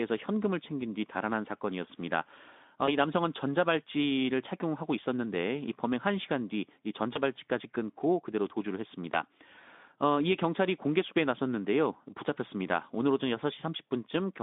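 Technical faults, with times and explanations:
2.86–2.88 s, 7.14–7.19 s and 9.12–9.18 s: VoIP packet loss concealed by the speech codec. At each point a single 20 ms frame went missing, and the decoder filled the gap by repeating its last pitch and filter with falling gain, giving a short stretched, fading sound, and the voice stays weak or distorted for tens of milliseconds after the next frames arrive. On a spectrogram this looks like the last sound stretched flat and fading inside the 200 Hz to 3.6 kHz band of the Speex stream; on the waveform, a brief stretch of decaying signal.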